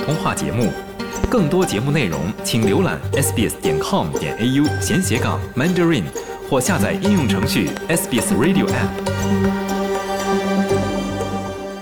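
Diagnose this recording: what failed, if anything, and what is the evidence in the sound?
A loud pop occurs twice, at 1.24 to 1.27 s and again at 7.77 to 7.80 s. Each is a single sharp transient lasting about 30 ms and peaking roughly 15 dB above the surrounding sound, which continues uninterrupted beneath it. The cause is likely a voltage step or pulse in the analogue wiring, from a plug, switch or static discharge, that was added to the signal and then shaped by the circuits that followed.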